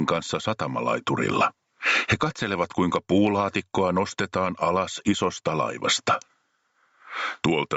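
The input gain was likely set far too high for the microphone, so a fast limiter or compressor keeps clamping the level on every loud moment, and the result is gain pumping throughout the clip. The level ducks under each loud onset, swinging by roughly 25 dB. Loud and quiet passages end up squashed close together. The audio also passed through a call path, which holds it to about 8 kHz.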